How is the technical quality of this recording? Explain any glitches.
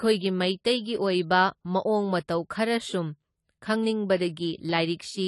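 The technical quality is compromised by plainly audible codec damage throughout the speech. AAC compression runs for the whole clip: the encoder discards everything above 11.5 kHz and quantises the remaining spectrum coarsely, leaving the speech dull and smeared. This fits a low bitrate around 32 kbps, likely AAC-LC.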